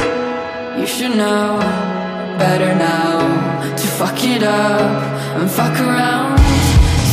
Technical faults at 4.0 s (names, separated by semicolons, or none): none